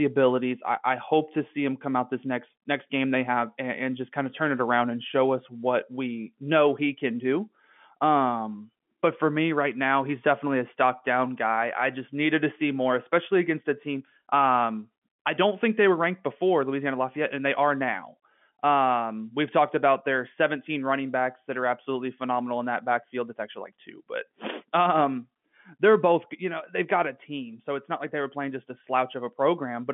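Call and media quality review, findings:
Nothing to flag on this speech clip: the narrow telephone band with nothing above about 3.7 kHz is just what ordinary G.711 telephone coding sounds like at 64 kbps, so there's nothing here to chase.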